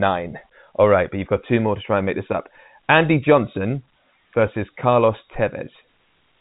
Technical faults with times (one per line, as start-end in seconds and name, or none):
none